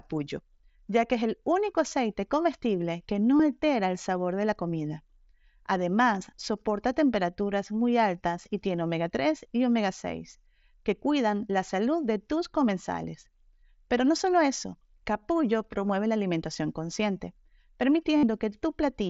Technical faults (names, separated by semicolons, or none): concealed Bluetooth headset packet loss